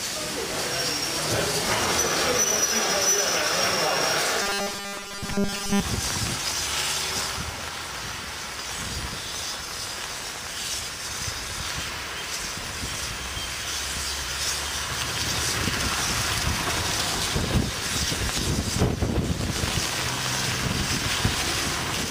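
From 4.42 s to 5.82 s the sound takes on a rigid, metallic buzz at 200 Hz, the robotic sound from repeated short buffers. The likely cause is fresh audio arriving too slowly, so the playback loops the last 5 ms over and over, standing in for most of this stretch while the real material is skipped. On a waveform, identical 5 ms cycles stack up; a spectrogram shows flat, evenly spaced harmonic lines every 200 Hz.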